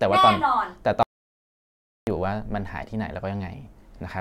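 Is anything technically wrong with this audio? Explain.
Yes. From 1.03 s to 2.07 s the speech drops out completely for about 1.04 s, an audio dropout to silence. It cuts off mid-flow and resumes abruptly, and the gap holds no room tone at all, just silence. The likely cause is the input being lost, through a disconnected device, a failed link or a mute, while recording carried on writing silence. On a waveform this shows as a flat line, and on a spectrogram as a blank, energy-free vertical band.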